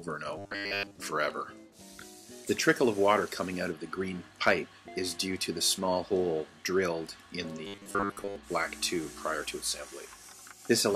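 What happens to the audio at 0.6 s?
At 0.6 s you're in the middle of robotic sound from repeated short buffers, running from 0.38 to 0.95 s. It's a rigid, metallic buzz at 100 Hz. The likely cause is audio arriving too slowly, so a chunk of about 10 ms gets replayed over and over in place of most of the real sound.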